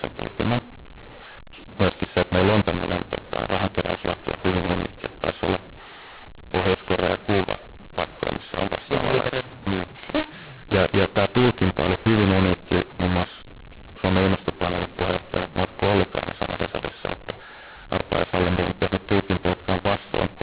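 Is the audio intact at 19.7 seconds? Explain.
No. At 19.7 s, as throughout the clip, the speech shows mu-law and A-law mixed up: telephone audio encoded with A-law is being decoded as mu-law. Each 8-bit code maps to the wrong level, so loudness is scrambled, the speech sounds harsh and distorted, and pauses fill with noise.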